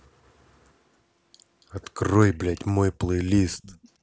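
Echo leak at 2.67 to 2.71 s and again from 3.52 to 3.79 s: a faint copy of the speech trails 277 ms behind. It is barely audible in the first short scrap and somewhat stronger in the second, likely from a loudspeaker whose echo canceller let some microphone pickup through.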